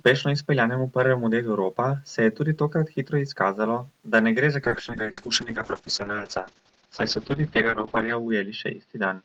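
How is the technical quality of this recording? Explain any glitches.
The speech degrades partway through. A call bitrate drop from 4.68 s to the end muffles it: the encoder coded more coarsely, near 6 kbps, and the audio lost everything above 6 kHz.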